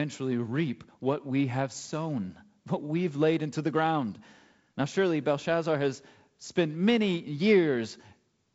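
No technical faults are present.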